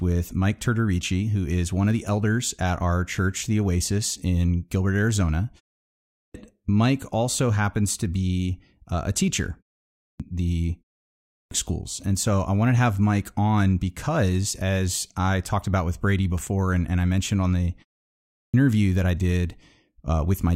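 Speech lurches in abruptly without its opening sounds at 5.99, 9.84, 11.14 and 18.16 s, a clipped start after a pause: each time about 0.35 to 0.38 s is swallowed while the output device wakes from sleep after a gap of 0.3 to 0.47 s.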